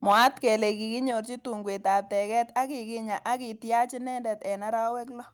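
A short speech recording opens with microphone overload from 0.09 to 0.48 s. The loudest syllables carry a harsh, crackling edge because the input was driven about 7 dB past what the converter could represent, so the peaks are sheared off. On a waveform the tops are cut flat, with roughly one sample in twenty clipped. A spectrogram shows broadband vertical smears of distortion energy above the harmonics at each clipped peak. The likely cause is an input volume set too high. The microphone volume is then stepped down twice, at 0.12 s and again at 1.11 s just before "tungwek ab teget ak". Both times the speech and the background fall together by about 4 dB in one instant, and the waveform envelope drops abruptly to a lower plateau. On a spectrogram the same moments appear as a sharp, full-width darkening across all frequencies at once. The likely cause is the call software reacting to the overloaded, clipping input by cutting the device's gain in discrete steps.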